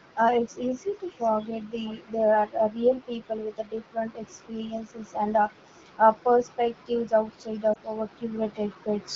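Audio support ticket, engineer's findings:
Echo leak, 0.97–2.24 s and 5.51 s to end of clip. Faint delayed copy of the speech trailing the direct signal by 455 ms, roughly 25 dB down in the first stretch, roughly 35 dB down in the second. Likely cause: far-end loudspeaker pickup with incomplete echo cancellation, residual returned to sender. Spectrogram: weak ghost of each syllable's harmonic pattern shifted right by about half a second. Waveform: low-level tail filling gaps after bursts.

Lost AMR speech frames, 7.73–7.77 s. One 20 ms frame dropped. Brief dip/warble in the speech, then recovery with slight roughness. Mechanism: radio bit errors failed the frame checksum, so the AMR-WB decoder (12.65 kbit/s, light coding damage elsewhere) concealed by repeating the last good pitch and vocal-tract parameters at reduced gain. Spectrogram: momentary smearing or blurring of formant/harmonic detail in a narrow vertical slice. 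Waveform: short amplitude notch.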